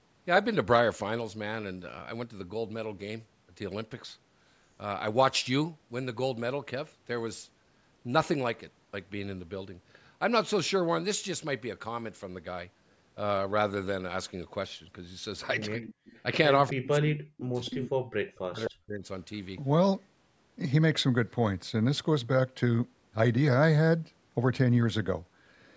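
From 15.76 to 16.03 s the talker's level drops sharply, by around 40 dB at its deepest, totalling about a tenth of a second. This is speech suppressed in double talk, likely an echo canceller clamping down on both its own talker and the loudspeaker echo while the far side was also talking. Overlapping it, from 15.81 to 16.2 s, a faint copy of the voice trails the original by 261 ms at about 20 dB below the speech. That is an echo leak, with loudspeaker pickup at one end likely getting past cancellation and returning as a delayed duplicate. The suppression comes back for longer from 16.72 to 17.86 s, affecting roughly a second of sound. The echo reappears from 17.65 to 17.9 s, at the same 261 ms delay and louder, about 15 dB below the speech. A last suppressed stretch, from 18.36 to 19.05 s, affects about half a second with similar depth.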